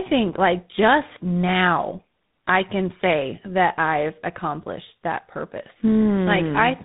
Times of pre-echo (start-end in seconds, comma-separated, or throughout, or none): none